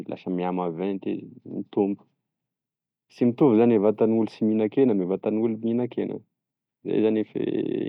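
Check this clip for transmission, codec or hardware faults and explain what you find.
There's one fault in this speech clip, a corrupt FLAC frame at 4.31 s. Flipped bits threw the decoder's prediction onto wrong numbers until clean data resumed, giving a brief error peaking about −35 dBFS. It's tiny, and it looks like it touched two frames.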